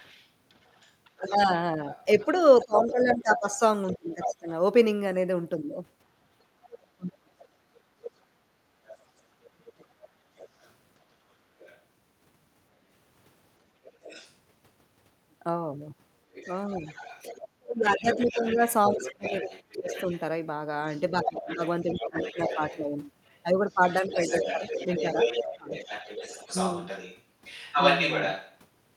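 From 0.0 to 28.6 s a second voice runs under the speech at roughly 10 dB below the talker: the other side's voice leaking through. The likely cause is loudspeaker playback picked up by the microphone and left behind by an echo canceller that did not fully remove it.

Between 1.35 and 9.93 s the talker's speech repeatedly sinks, for around three seconds in total, with the deepest dips near 35 dB. This is speech suppressed in double talk. With both sides active, the canceller likely cannot tell near speech from echo and turns both down.

At 8.99 to 9.10 s the room background itself drops by about 9 dB for roughly 100 ms and then returns. This is background gated by the echo canceller, which clamps the microphone hard while playback is running.

From 16.79 to 25.70 s the same double-talk suppression recurs, again for about three seconds in total, with dips reaching roughly 25 dB.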